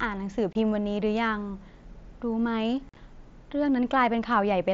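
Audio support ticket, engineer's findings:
Unconcealed Bluetooth headset packet loss at 0.53–0.55 s and 2.89–2.97 s. The speech drops into abrupt holes. The first hole is about 22.5 ms, which fits three lost 7.5 ms packets. The second is about 60 ms of gaps spread over 75 ms, with the longest run 45 ms, so it sounds chopped. Lost packets were replaced with silence or an idle pattern and no concealment. The mSBC wideband link carries audio up to 8 kHz with light graininess.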